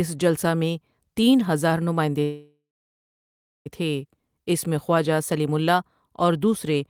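Right after "میں تین ہزار نماٸندے", at 2.23 s, the speech stops and the last sound stretches into a fading buzz for roughly a third of a second, then drops to silence until 3.68 s. The speech then resumes exactly where it left off, with nothing skipped, so everything after it runs about 1.42 s late. This is a call audio freeze, likely from packets delayed in transit that left the jitter buffer empty until they arrived.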